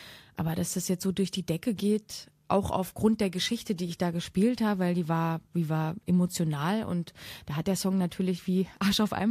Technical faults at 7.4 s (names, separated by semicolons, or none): none